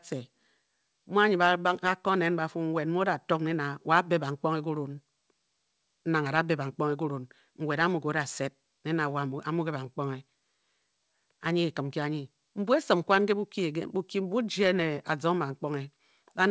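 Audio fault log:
No faults heard anywhere in this speech.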